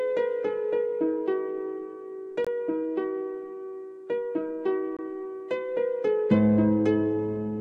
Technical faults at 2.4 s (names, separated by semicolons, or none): gap between chunks